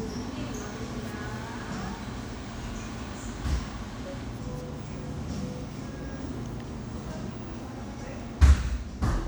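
No technical faults occur anywhere in this recording of sounds, so there is nothing to describe in time order.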